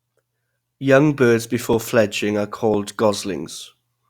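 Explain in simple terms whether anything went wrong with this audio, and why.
Yes: overlapping chunks. The speech was handled in one-second pieces that overlap slightly, so about 6.5 ms repeats at 1.73 and 2.74 s, giving clicks.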